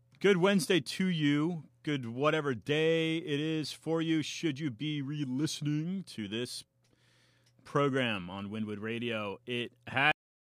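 Right at the end, about 10.12 s in, there's a cut-off end: the speech stops mid-sound and falls straight to digital silence with no natural decay. The final stretch of audio buffers never got written out, so the last 0.3 s or so is just gone.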